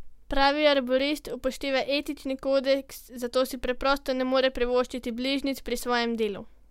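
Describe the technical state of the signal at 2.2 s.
At 2.2 s the speech signal is intact, with no audible fault at that moment.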